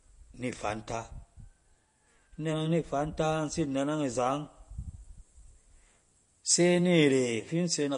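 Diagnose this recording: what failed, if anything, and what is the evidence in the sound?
The damage sits at the codec stage, and it's there for the whole recording. The top end stops dead at about 10.6 kHz, and the speech has that watery, swirly texture, with s sounds going metallic and consonant attacks smeared. That's likely MP3 compression at a low bitrate, something around 40 kbps. Starved of bits, the encoder chops off the treble and zeroes quieter frequency lines, which then flicker in and out from frame to frame.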